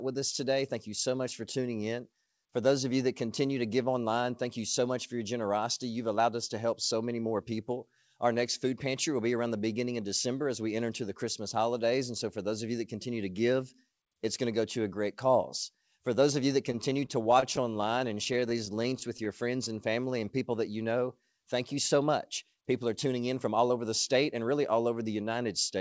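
A speech recording carried over a call path with a wideband codec, likely G.722, so nothing is heard above 8 kHz. From 16.72 to 19.27 s, after "those of you that", repeated stalls (stutter) occur: the jitter buffer ran dry many times, with gaps of up to 23 ms bridged by continuing the last sound, about 12% of the span. The speech drags but loses nothing. A jitter buffer slow-down follows from 19.44 to 20.25 s, just before "people that you know". Repeated pitch periods add 93 ms to rebuild the reserve, so delivery runs at 90% speed with unchanged pitch. Between 22.55 and 24.51 s, after "thank you so much" and before "all over", a jitter buffer speed-up removes around 150 ms of pitch periods to shed excess delay, so the speech sounds hurried at 107% speed.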